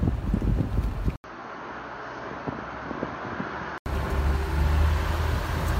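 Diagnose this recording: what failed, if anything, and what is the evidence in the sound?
The fault sits at the capture stage, in device selection. From 1.16 s to 3.86 s the sound turns duller and boxier, with nothing above 6.6 kHz, and it drops about 10 dB in level. There is an 80 ms silence at the switch. A different, faint noise floor sits well below the signal during that stretch, then full bandwidth returns at 3.86 s. This points to the input likely being switched to a poorer device with a narrower band, then restored.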